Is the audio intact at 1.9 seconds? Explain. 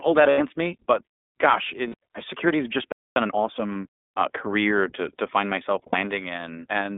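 No. From 1.88 to 1.94 s there are lost iLBC frames. The 60 ms gap fits three missing 20 ms frames. The decoder fills it by repeating the last pitch cycle mixed with noise. It sounds like a held, buzzy or breathy vowel. Each iLBC frame stands alone, so the voice comes back right almost at once.

The moment also carries the iLBC codec, plainly audible. The band runs from 250 Hz to 3.6 kHz, which fits iLBC at 15.2 kbps. Each frame's excitation is coded separately. Speech stays clear but sounds rough and synthetic.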